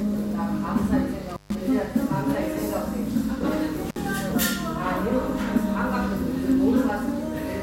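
At 1.29 s an intermittent contact drops the signal: a loose plug or cable connection opens briefly, and the sound cuts out for about 139 ms within a disturbance lasting to 1.55 s, with crackle at each edge as the contact breaks and remakes and only faint hiss in the gap. The same fault returns at 3.89 s, a shorter break of about 55 ms ending by 3.96 s, again bracketed by crackle.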